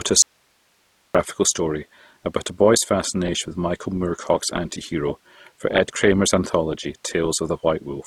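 Throughout, smeared swirly highs layered with gritty pre-echo point to transcoding between lossy codecs, likely an MP3 near 51 kbit/s re-encoded as Opus near 24 kbit/s; the spectrogram shows a hard top cut-off. From 0.22 to 1.15 s, an audio dropout to a faint residue leaves only hiss about 40 dB down, likely from a lost signal feed. The waveform collapses abruptly to a thin noise band, and the sound returns mid-flow at "story about a boy's".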